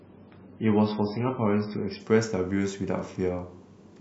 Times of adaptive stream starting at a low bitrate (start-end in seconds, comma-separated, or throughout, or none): 0.00-2.00